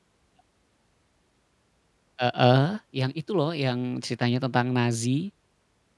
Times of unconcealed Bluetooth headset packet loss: none

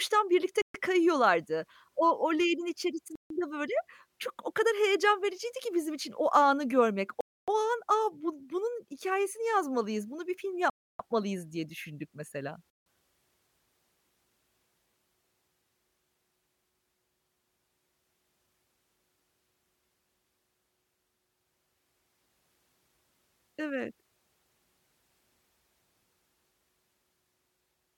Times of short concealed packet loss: none

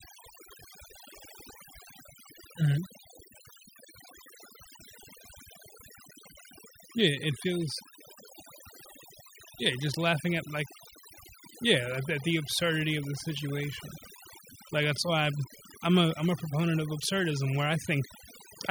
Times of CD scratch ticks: none

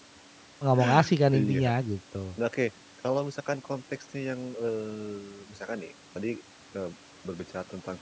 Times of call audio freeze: none

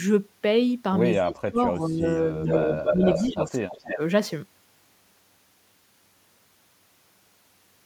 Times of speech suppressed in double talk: 1.18-2.04, 2.32-4.00

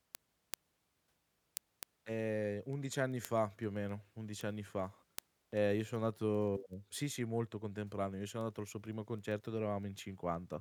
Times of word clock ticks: 0.15-10.60

